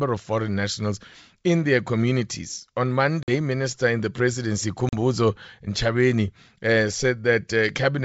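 At 3.23 and 4.89 s, packet loss on an ADPCM call leaves hard silent gaps of about 50 and 40 ms. The decoder loses track of the sender, so speech returns with brief distortion.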